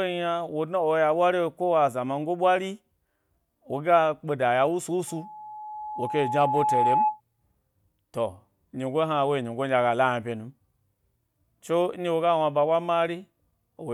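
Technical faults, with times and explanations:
5.07 to 7.21 s, loudspeaker feedback squeal. A pure tone near 853 Hz rises out of the speech. It swells steadily over about two seconds. At its peak it sits a little louder than the speech itself. The microphone is picking up the loudspeaker it feeds. At this one frequency the loop returns more than it receives, so the tone feeds itself and keeps growing. It stops at 7.21 s.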